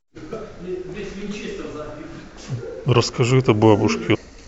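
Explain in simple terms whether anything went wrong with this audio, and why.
Two brief glitches interrupt the speech, from 0.33 to 0.35 s and from 4.14 to 4.16 s. Each is a case of damaged data in a compressed stream: part of the compressed file was wrong, so the decoder couldn't read that stretch, lost its place, and jumped to the next readable point. Each is a short disturbance in the sound lasting about a fiftieth of a second.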